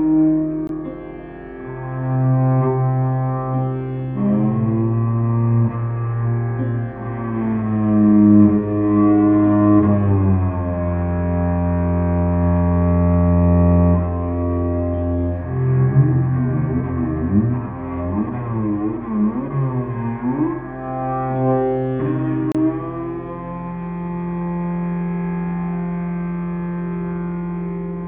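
Gaps at joins of encoded pieces occur at 0.67 s (about 20 ms) and 22.52 to 22.55 s (about 30 ms). Separately encoded sections were butted together untrimmed, leaving each encoder's start-up delay and end padding as brief, smeared silences before the sound resumes where it stopped.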